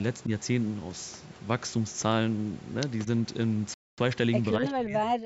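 A Bluetooth stall runs from 3.74 to 3.98 s: the speech cuts to about a quarter second of silence, then resumes. Interference likely held back packets, so the headphone buffer emptied and playback waited for the retransmitted audio to arrive.

Speech suppressed in double talk follows from 4.58 s to the end at 5.25 s. Over about half a second in total, the voice dips, dropping by roughly 30 dB at its deepest. This likely happens because the echo canceller couldn't separate this talker from loudspeaker echo while both sides spoke, so it turned the speech down.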